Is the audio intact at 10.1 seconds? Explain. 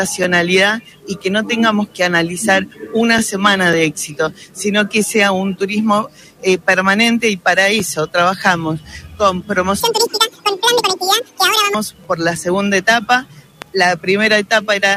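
No. From 9.80 to 11.74 s the audio is read two samples at a time (double speed): the reader treats each pair of samples as a single frame. The audio plays twice as fast and a full octave higher.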